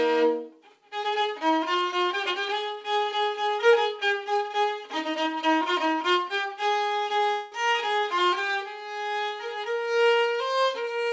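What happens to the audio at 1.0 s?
Nothing goes wrong at 1.0 s: the audio runs on intact through that moment, carried by a call path that is working normally and whose band-limiting, with nothing above 8 kHz, fits a G.722 wideband codec.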